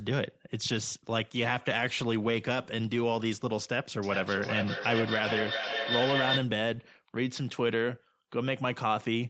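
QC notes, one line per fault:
4.03–6.56 s, feedback echo between two devices: a second device in the room plays back the call and its sound is picked up again by this microphone, beyond the reach of either echo canceller, so the loop keeps feeding itself. The speech returns at a steady interval of roughly 0.4 s, each pass thinner and more ringing, and the repeats reach about 1 dB below the direct speech, sitting inside the 8 kHz band the call path carries.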